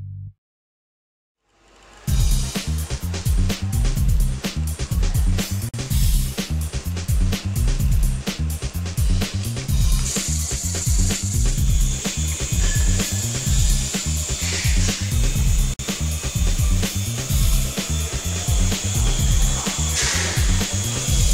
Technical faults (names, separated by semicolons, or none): gap at a join of encoded pieces